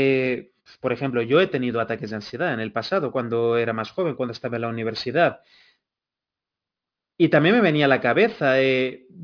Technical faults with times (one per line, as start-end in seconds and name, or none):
0.00-9.23 aliasing